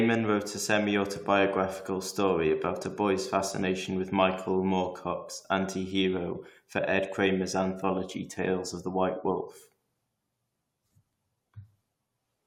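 No technical faults can be heard anywhere in it.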